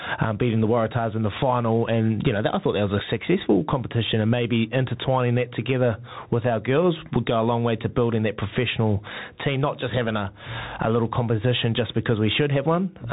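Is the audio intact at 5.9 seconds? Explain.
No. At 5.9 seconds, as throughout the clip, two faults are present. The first is gain pumping, most likely from input gain set far too high with a fast limiter or compressor pulling it back down on each loud syllable. The level swings by around 20 dB, so loud and quiet parts sit close together and the speech sounds squashed and breathing.

The second is the Bluetooth CVSD headset codec. The speech has passed through a narrowband one-bit delta encoder that only signals up or down at each sample, with an adapting step size, which fits a 64 kbps CVSD link. Nothing above 3.8 kHz survives, so the speech is dull and telephone-like. The damage is plainly audible: loud, bright sounds outrun the step and distort, s sounds turn scratchy, and a grainy hiss sits underneath.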